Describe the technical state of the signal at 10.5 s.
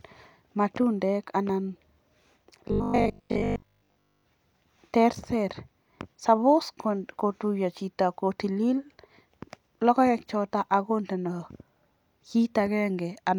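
At 10.5 s the speech signal is intact, with no dropout, distortion or other fault at that moment.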